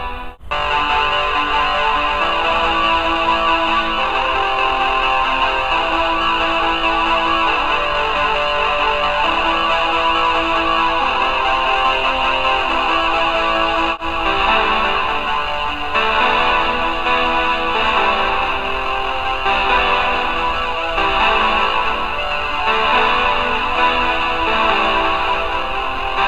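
Nothing here calls for comment, since no technical fault turns up anywhere in the audio.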